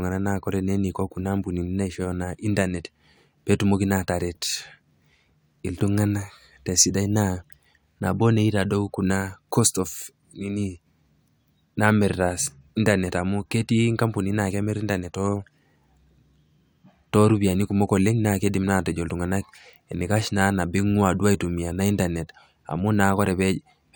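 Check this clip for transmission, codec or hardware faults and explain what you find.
Nothing faulty can be heard in this recording.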